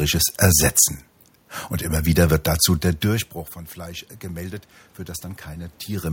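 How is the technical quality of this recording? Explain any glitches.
The recording has one glitch, an automatic gain rise. From 2.82 s to 5.81 s, after "immer wieder wird dazu", the speech level drops by about 19 dB as the talker moves back at roughly 3 s. The automatic gain control then slowly lifts its gain by about 5 dB. The room noise swells along with the voice, which shows that the gain is at work and not only the talker's movement.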